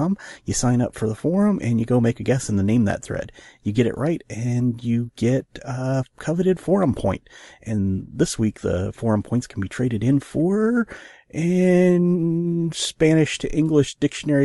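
A speech clip with plainly audible codec damage throughout. It is likely Bluetooth LC3 compression. This transform codec codes sound in short frames and spends too few bits on detail. The damage fits 7.5 ms frames at about 48 kbps.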